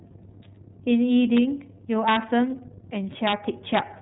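Throughout, an iLBC codec band-limits the sound below 3.8 kHz. Frames coded independently, likely about 30 ms long, leave it rough and synthetic. At 1.37 s, and from 2.08 to 2.16 s and 3.27 to 3.33 s, integer overflow strikes. Peaks up to about 4 dB over full scale wrap to the opposite sign, giving violent cracks.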